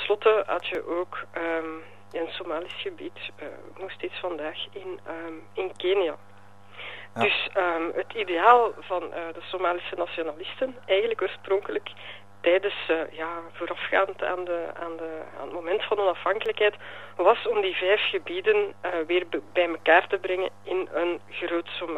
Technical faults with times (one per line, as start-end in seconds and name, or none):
0.75 dropped samples
11.63 dropped samples
16.46 dropped samples